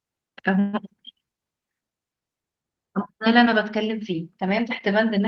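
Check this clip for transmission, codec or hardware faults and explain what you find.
A call audio freeze occurs from 0.59 to 0.75 s. Packets were most likely held up in transit, and the jitter buffer ran empty. The receiver covered the wait by extending the last bit of speech for about 139 ms, so it is heard as a short smeared buzz that fades without ever dropping to silence. When the packets arrived, speech resumed exactly where it stopped, with nothing lost, but everything after it runs about 139 ms late.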